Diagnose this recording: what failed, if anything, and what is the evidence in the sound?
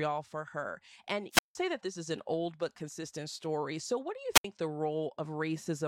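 Wireless microphone squelch dropout, twice, in the analogue radio link. From 1.32 to 1.56 s, the speech falls into a 167 ms mute. From 4.34 to 4.45 s, it mutes for 70 ms. Hiss rises first. The FM signal fades, and the receiver's squelch shuts off the output.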